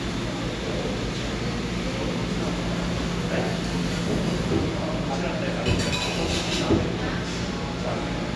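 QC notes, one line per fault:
No technical faults are present in the signal.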